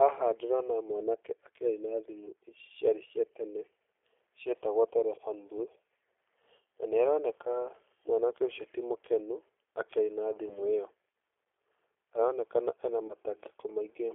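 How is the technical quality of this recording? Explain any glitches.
The recording is plainly coloured by a low-bitrate speech codec and has two brief dropouts late in the clip.

G.729 codec, throughout: the speech is confined to roughly 300 Hz to 3.5 kHz and has the rough, slightly synthetic texture of a model-based coder, consistent with G.729A at 8 kbit/s rebuilding each frame from a filter, pitch predictor and sparse pulses.

VoIP packet loss concealed by the speech codec, at 10.49 to 10.61 s and 13.07 to 13.14 s: each gap is 20 ms, which fits a single lost packet. The decoder extends the previous frame's pitch and filter at falling gain, causing a short buzzy or noisy smear, with weakened speech lingering until the decoder's state recovers.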